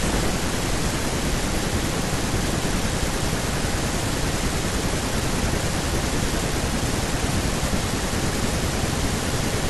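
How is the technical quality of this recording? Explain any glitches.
No technical glitches can be heard anywhere in the recording; the signal stays steady and intact throughout.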